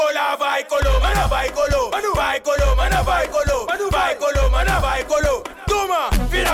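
No technical faults are audible.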